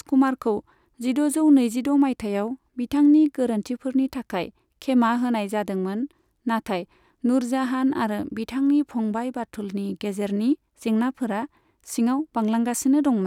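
No faults turn up anywhere in this speech recording; there are no dropouts, clicks, distortion or level jumps to report.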